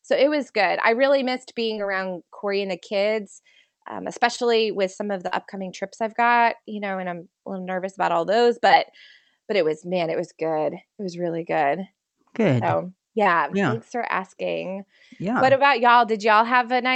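A switching supply whistle runs through the whole clip, a faint high tone drifting between about 13.1 and 14.8 kHz, roughly 30 dB below the speech.

Short concealed packet losses occur at 1.73–1.78 s, 4.36–4.39 s, 5.27–5.33 s, 8.67–8.71 s and 13.23–13.27 s. About 20 ms of audio went missing each time, and about 40 ms at 5.27 s. The decoder stretched the preceding sound over each gap, so they are heard as brief smears or wobbles rather than hard clicks or silent dropouts.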